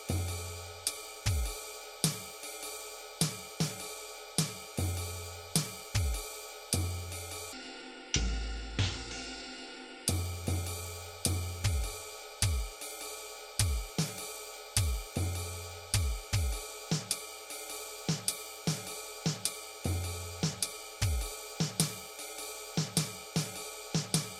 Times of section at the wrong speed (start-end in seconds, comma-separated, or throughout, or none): 7.53-10.08